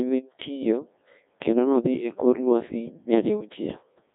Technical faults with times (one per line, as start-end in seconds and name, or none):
0.00-4.15 Codec 2 vocoder